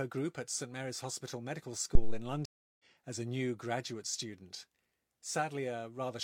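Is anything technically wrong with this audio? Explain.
Yes, there are two faults in this speech clip.

At 1.95 s a phantom power thump begins and lasts until about 2.28 s. Switching a supply on a live input sends a sudden DC step through the coupling capacitors, and the preamp passes it on as a deep, boomy knock that dies away with a decay of about 73 ms. On a waveform it appears as a large, lopsided excursion that relaxes back to centre. On a spectrogram it is a bright smear confined to the lowest frequencies.

From 2.45 s to 2.84 s there is a stream reconnect. The connection dropped, the player fell silent for 341 ms, then reconnected and started a new decoder in mid-stream. Because the stream kept moving while the player was cut off, the speech resumes roughly 0.4 s further on, with "as a new graduate", so a short stretch is lost. The waveform shows a flat gap, and the spectrogram shows a blank vertical band before the speech energy fades back in.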